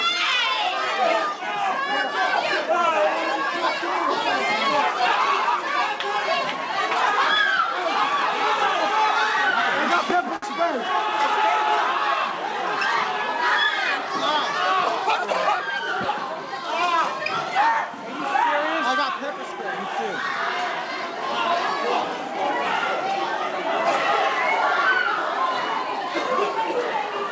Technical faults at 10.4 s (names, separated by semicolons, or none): short stall from a late packet